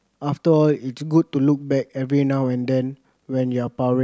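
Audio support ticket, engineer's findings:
No technical faults found in the signal path; the speech recording shows no dropouts, distortion, timing errors or level problems needing action.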